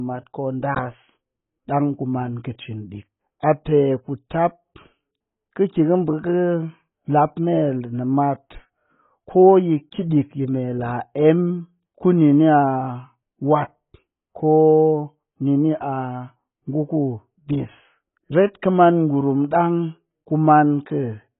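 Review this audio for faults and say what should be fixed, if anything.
AAC compression throughout: nothing survives above 3.8 kHz, leaving dull, smeared speech, likely from AAC-LC starved at a bitrate near 16 kbps. Re-encode from the original source at a higher bitrate, or keep a lossless copy, so the upper bands are preserved.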